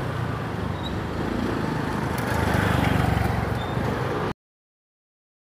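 At 4.32 s the audio has a cut-off end. The final buffers never played, so the sound stops mid-event and drops straight to digital silence, with no decay.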